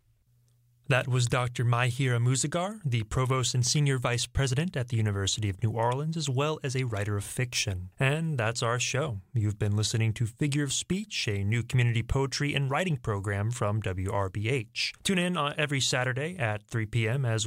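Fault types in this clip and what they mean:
No technical faults are audible in this speech.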